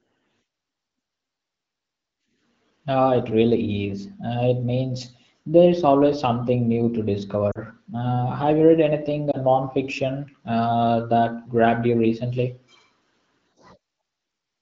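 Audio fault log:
7.51–7.59 s and 9.31–9.37 s, lost AMR speech frames: a 40 ms gap after "always something new to" and a 20 ms gap after "have you read anything" (before "non fiction uh that"), which fits two frames and one frame. At each, the AMR-WB decoder repeats its last good pitch and spectral settings at falling gain, giving a drop to near silence over the two-frame run and a brief dip or warble at the single lost frame. On a spectrogram, harmonics smear flat and fade; the waveform shows an envelope notch.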